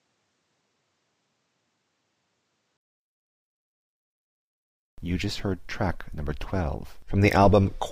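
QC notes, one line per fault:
0.00–2.79 s, input likely switched to a poorer device: dull, nothing above 8.9 kHz, faint extra noise, level a few dB different; 20 ms gap at the switch.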